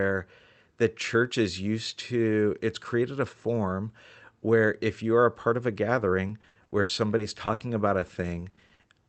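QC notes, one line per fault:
6.27–8.91 s, repeated packet loss (robotic sound): after "a part of a", packets keep dropping; gaps up to 80 ms are filled by repeating prior sound, so speech turns choppy with pieces missing.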